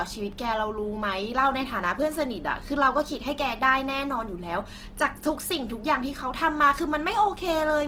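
A speech clip with Opus compression all the way through: it sounds rough and grainy, likely from a low-rate encode near 16 kbps, yet the bandwidth stays wide.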